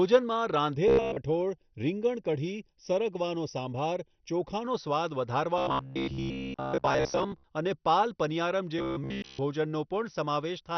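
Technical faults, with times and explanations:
Throughout: MP2 compression. The speech is dull, with nothing above 6.2 kHz, and carries a gurgling, granular roughness. This is likely MPEG Layer II coding at a low rate, around 48 kbps. Starved of bits, the encoder switches off whole upper sub-bands and quantises the rest coarsely, so bands flicker in and out. Unlike a simple low-pass filter, the top edge shifts and the remaining bands sound grainy.
0.75–4.65 s: channel delay (comb filtering). The speech sounds hollow and phasey. One channel arrives a fraction of a millisecond behind the other, and summing the two to mono cancels their shared content at evenly spaced frequencies, with the first notch around 1.5 kHz. Unlike codec dullness, these notches sit fixed in the spectrum and the sound keeps its grain.
0.88–1.18 s, 5.58–7.44 s, 8.79–9.39 s: robotic sound from repeated short buffers. 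The speech becomes a rigid, metallic buzz at 66.7 Hz that still roughly follows the words. The likely cause is audio arriving too seldom: the last 15 ms is replayed to fill the gaps, with most of the time spent on repeats, and the looping imposes its own pitch. A dropout would give silence instead, and a comb filter never adds a buzz.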